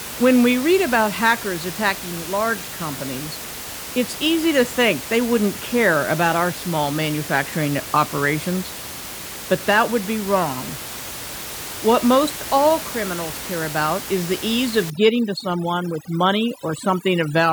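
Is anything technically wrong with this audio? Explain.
Yes. From 14.9 s to the end at 17.52 s, there is overdone noise removal. A noise reduction stage is set too strong here. It cuts individual frequency bands hard whenever they sit near its noise estimate, taking quiet parts of the speech with them. The room noise, about 12 dB below the speech, drops and breaks up into twinkling specks.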